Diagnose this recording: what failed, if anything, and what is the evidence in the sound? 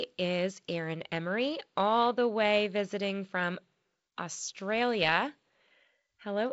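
Nothing in the chain has failed: the speech carries the expected G.722 wideband telephone coding, with no content above 7.7 kHz and only the light added noise that fits its 48 kbit/s mode.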